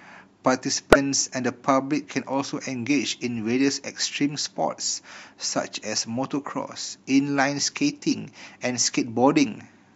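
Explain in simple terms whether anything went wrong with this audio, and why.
A brief squeaky burst cuts through the speech at 0.93–0.96 s and again at 8.11–8.15 s. This is a corrupt frame decoded: damaged compressed data was played anyway.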